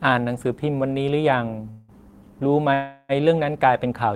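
At 1.70 s the speech stalls into a call audio freeze lasting until 1.92 s: the last sound is held over as a fading buzz for about 182 ms, then the speech resumes where it stopped with nothing lost, only delayed. A longer freeze follows from 2.74 s to 3.12 s, filling about 356 ms the same way. Both likely come from packets held up in transit, draining the jitter buffer until they arrived.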